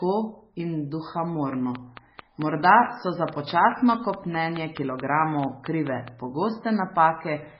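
Heavy MP3 compression runs through the whole recording. Nothing is left above 5.5 kHz, so the speech sounds dull and boxed in. Weak detail swirls and warbles as the encoder likely starved for bits. The damage suggests a very low bitrate, around 16 kbps.

From 1.53 s to 6.09 s a train of clicks sits over the speech. There are about twenty. They tick steadily at 4.62 per second and peak roughly 10 dB above the speech. They continue through the pauses. Interference or a faulty connection or power supply is the likely cause.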